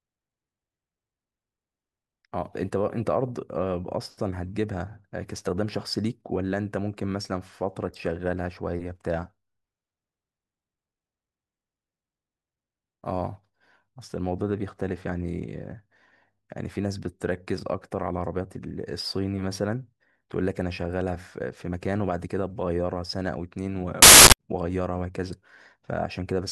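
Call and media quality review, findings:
Loud broadband noise burst, 24.02–24.33 s (about 0.31 s). Samples built from the wrong bytes: misaligned decode makes low-order bits dominate each value. Suspect sample reader/unpacker.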